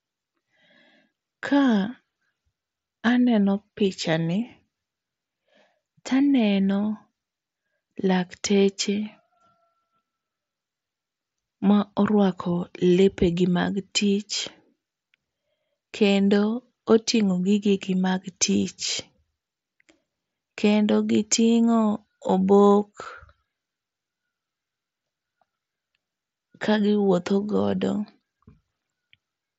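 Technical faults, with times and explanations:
23.05 s, unconcealed Bluetooth headset packet loss: a brief hole of about 7.5 ms cuts into the speech with abrupt edges, consistent with a single lost headset packet on the wideband mSBC link being replaced by silence rather than concealed.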